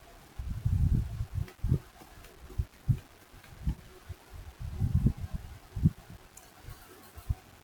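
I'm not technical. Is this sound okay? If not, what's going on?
No. The whole clip has a grainy, gritty roughness that rides along with the speech, from start to end. It gets more noticeable as the voice gets quieter, and the softest moments sound crackly or break up instead of fading smoothly. This is low bit depth without dither. The recording was most likely stored with only 8 bits, so each sound level gets rounded to a coarse step. That rounding leaves a fairly strong grit that follows the voice.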